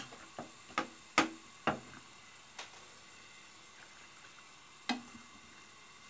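The sound carries no faults; it arrives over a normally working call path whose band stops at 8 kHz, with nothing audible above that.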